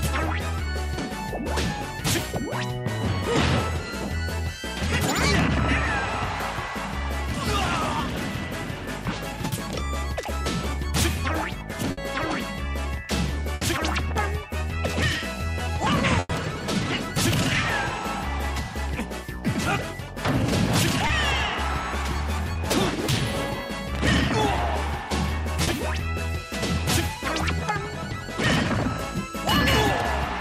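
Three bursts of packet loss stand out: at 11.91 s and 13.55 s, about 60 ms of audio is dropped, and at 16.19 s, about 100 ms, including a brief 20 ms stretch of pure silence. In each case the receiver keeps extending the last bit of sound and fading it down, so you hear a held buzz or a dying hiss. The sound then picks up further along, with that stretch simply gone. There are also four shorter concealed packet losses, at 14.91 s, 21.07 s, 22.53 s and 25.63 s. The first three cover only about 20 ms each and the last about 40 ms. Here the decoder papers over the hole by continuing the previous sound, then blends back into the real signal. So rather than a clear gap you get a quick smear or wobble, and a short transient can vanish.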